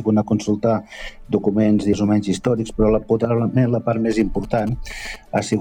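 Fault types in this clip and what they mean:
GSM signalling bursts: a 2G handset near the equipment transmits short groups of radio bursts while signalling, as happens before a call or text arrives, and the audio circuitry rectifies the RF envelope into audible interference. In this clip it runs from 4.11 s to 5.54 s as a galloping dit-dit-dit of brief buzzes with a 216.7 Hz repeat rate, sitting roughly 20 dB below the main sound.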